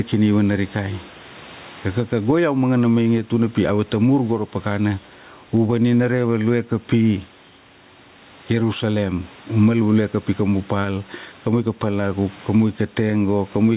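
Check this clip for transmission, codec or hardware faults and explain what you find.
One fault runs through the whole recording: gain pumping. The band-limited, telephone-like sound, with nothing above 4 kHz and the grain of companding noise, fits an ordinary G.711 A-law call path at 64 kbps and is not a fault.

Gain pumping is present from start to finish. The input gain is likely set far too high, so a fast limiter clamps down on each loud syllable and releases in the pauses, swinging the level by around 10 dB. The room noise sits about 35 dB below the speech, and the speech sounds squashed. On a waveform the peaks look flattened to a near-constant height.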